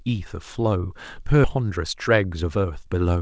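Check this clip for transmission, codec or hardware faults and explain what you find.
There are two faults, both in delivery and playback rather than the codec path, which is band-limited with nothing above 8 kHz, consistent with G.722.

At 1.44 s there is a skip ahead: roughly 0.7 s of speech is dropped, and the two sides join almost seamlessly.

From 1.56 s to 3.17 s, jitter buffer speed-up plays speech about 11% fast at unchanged pitch, trimming pitch-period slices to shed around 0.2 s of delay, sounding hurried.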